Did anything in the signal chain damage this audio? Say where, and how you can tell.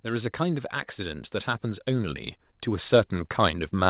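Yes. The damage comes from the call processing stage, where the automatic gain is rising. From 0.05 s to the end at about 3.9 s, the speech and the background noise swell together, steadily and slowly. Both get louder at once, so the level change did not come from the talker. The automatic gain control judged the input too quiet and kept raising its gain through the clip. The G.711 call path adds its usual band limit at 4 kHz.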